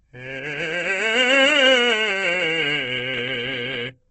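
Throughout the music, the audio was most likely squeezed through Opus compression at a very low rate, with heavy damage that fits roughly 12 kbps in its music mode. Short of bits, the encoder rebuilt many bands from folded copies or noise, so tones come out grainy, rough and hissy rather than clean. The bandwidth was also narrowed to wideband, leaving nothing above 8.3 kHz and giving the whole clip a dull, closed-in top.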